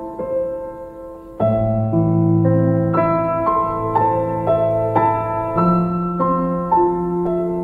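A DC step occurs at 7.27 s, where the waveform's zero line suddenly jumps to a new resting level, offset by about -32 dBFS. The abrupt shift registers as a single low thump or click near the end of the clip, while the sound carried on top of it continues unchanged. The offset then decays away rather than holding, drained off by a high-pass at about 5 Hz, so the baseline settles back over a fraction of a second.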